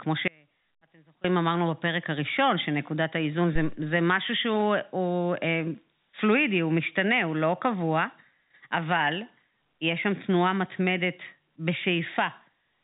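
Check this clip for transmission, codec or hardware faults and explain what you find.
Two faults stand out in this speech recording, which passes through G.711 telephone coding with nothing above 3.8 kHz.

From 0.28 to 1.24 s there is an audio dropout to a faint residue: for about 0.96 s the speech collapses to a faint leak roughly 30 dB below its normal level. The likely cause is the wanted feed being lost while the path behind it stayed live. The cut is abrupt in both directions, which sets it apart from a natural pause or a fade.

At 3.56 to 3.83 s a phantom power thump appears: a supply switched on or off on a live input sends a voltage step through the coupling capacitors, giving a deep low thud that dies away in about 62 ms. That single low-frequency thump, with no crackle or repeated clicks, distinguishes it from a loose connector.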